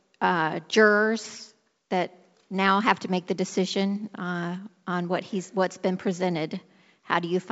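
Nothing stood out on listening to this speech, which comes through with the band-limited, wideband-telephone character of G.722 coding.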